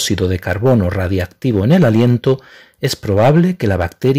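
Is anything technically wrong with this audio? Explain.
Yes. Hard clipping runs throughout. The signal is driven about 8 dB past the limit, so peaks are cut flat. That adds high harmonics, heard as crackle on loud moments.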